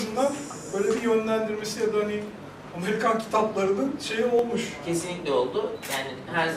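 At 2.43 s and again at 4.39 s a single sharp click cuts through the sound. Each is likely dropped samples, a fraction of a millisecond missing so the waveform jumps. Unlike a dropout, no audible gap or lost sound follows.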